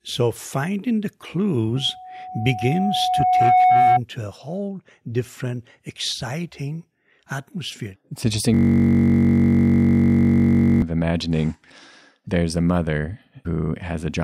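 From 1.76 to 4.00 s there's a loudspeaker feedback squeal. A mic is catching the speaker it feeds, and around 737 Hz the loop gain tips over one, so that tone keeps feeding itself. You hear a single whistle swell up over about two seconds until it sits roughly 10 dB above the speech. It cuts out right before "a whole different exciting".

Then from 8.54 to 10.82 s you get a system hang loop. The machine or its driver froze, but the audio hardware kept replaying the same ring buffer. A 21.33 ms slice of sound repeats exactly, over a hundred times, which fits a 1024-sample buffer. Because the slice is so short, it doesn't come across as a stutter. It's a steady, flat buzz at about 46.9 Hz, the rate the loop comes round.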